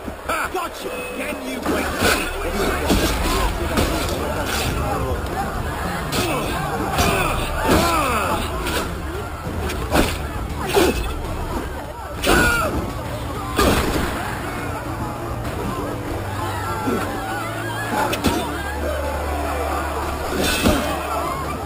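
From start to finish the audio carries imaging from sample-and-hold upsampling. The rate was raised from 12 kHz to 48 kHz by repeating each sample with no smoothing filter, so mirror copies of the spectrum fill the range above the original 6 kHz limit, the lowest spanning 6 to 12 kHz at about 15 dB below the signal. It sounds like a bright metallic fizz. Unlike steady hiss, it rises and falls with the sound, and that lowest band moves opposite to the pitch.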